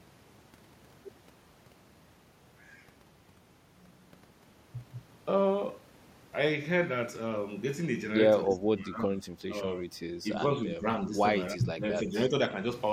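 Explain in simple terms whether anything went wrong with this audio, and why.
The speech dips and partly cuts out at 8.46 to 9.26 s, 9.45 to 9.55 s, 10.22 to 10.84 s and 11.54 to 12.36 s. This is speech suppressed in double talk. An echo canceller likely turned the talker down while the other side spoke.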